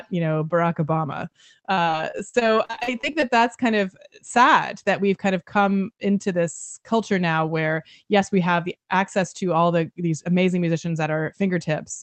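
From 1.73 to 3.24 s, just before "that's kind of sad", repeated packet loss gives the speech a choppy, robotic quality: more than a dozen short holes, none longer than 43 ms, are patched by stretching the preceding sound, concealing about a quarter of the span. A single dropout would leave one isolated blip.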